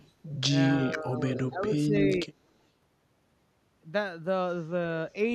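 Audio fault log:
0.00 to 0.11 s, echo leak: a faint copy of the speech trails by about 226 ms, roughly 30 dB down, likely a loudspeaker echo the far end's canceller missed.
0.69 to 1.21 s, speech suppressed in double talk: the voice sinks by around 15 dB for about half a second, likely the canceller ducking everything while both sides talked.
1.36 to 1.40 s, echo leak: a brief, fairly strong echo, around 15 dB below the speech and delayed about 246 ms, likely leaking back through the canceller.
1.49 to 2.09 s and 2.26 to 2.35 s, speech suppressed in double talk: the voice dips again, around 10 dB then a sharper 20 dB pinch, likely overlapping talk fooling the canceller.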